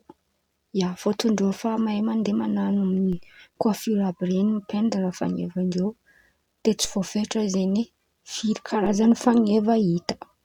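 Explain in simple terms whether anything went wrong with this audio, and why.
Yes, something went wrong. A low thump or click sounds at 3.13 s, another at 6.85 s, and a third at 8.86 s, while the speech carries on unchanged. This is a DC step: the waveform's resting centre line suddenly jumps to a new level, as happens when a converter recalibrates or an input with an offset gets switched in. It shifted at 3.13 s and snapped back at 6.85 s, then shifted again at 8.86 s and stayed shifted to the end.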